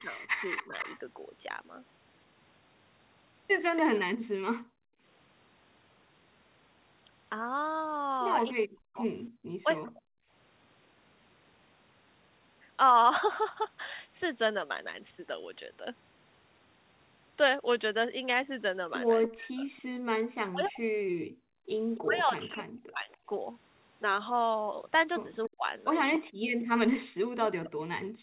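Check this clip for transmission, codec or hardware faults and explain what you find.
Three echo-canceller faults recur across the clip: speech suppressed in double talk, an echo leak, and background gated by the echo canceller. The audio stops at about 4 kHz throughout, which fits a narrowband G.711 call path and is not a fault.

Speech suppressed in double talk occurs at 0.00–0.74 s, 8.54–10.09 s, and from 19.27 s to the end. When both ends talk together, the canceller likely cannot separate the near talker from the loudspeaker echo, so it turns everything down. The speech dips by about 15 dB in the first stretch, totalling roughly half a second. Later it drops by as much as about 40 dB, for around 0.7 s in the second stretch and through the final section.

An echo leak runs from 0.00 to 3.81 s and again from 19.23 s to the end. The loudspeaker side's canceller likely failed to remove everything its microphone picked up from its loudspeaker, and the leftover was sent back. 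The result is a delayed copy of the speech trailing the original by 287 ms. It sits about 10 dB below the speech in the opening stretch and about 15 dB below in the closing one.

Background gated by the echo canceller occurs at 4.17–5.02 s, at 9.30–9.35 s, and at 21.13–21.68 s. During loudspeaker playback the canceller clamped the microphone hard, pushing the room sound down by up to about 37 dB. The background drops out for roughly half a second in the first and third cases and only a brief 50 ms in the middle one, then returns when the canceller releases.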